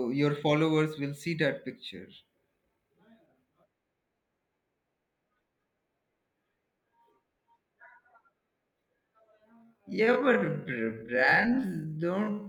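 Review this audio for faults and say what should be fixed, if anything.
From 9.49 s to the end, there's a time-stretched section: the speech drops to half speed with its pitch unchanged, so it drags, likely from software repeating short slices to fill time. Fix it by re-editing that part to length, not stretching it.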